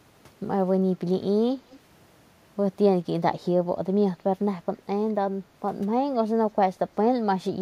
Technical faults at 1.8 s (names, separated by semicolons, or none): echo leak